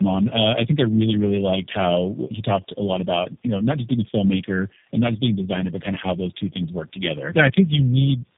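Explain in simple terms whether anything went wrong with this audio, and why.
Tandem speech coding runs through the whole clip: the speech sounds like it passed through about three phone codecs in a row, leaving it rough, muffled and warbly, with nothing above 3.6 kHz.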